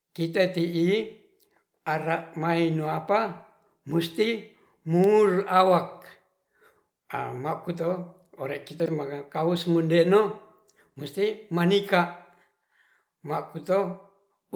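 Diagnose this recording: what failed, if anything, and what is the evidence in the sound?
Jumbled blips at 8.8 to 8.88 s and 10.9 to 10.94 s: chunks out of order, a 20 ms buffer block played three, then one, chunks late.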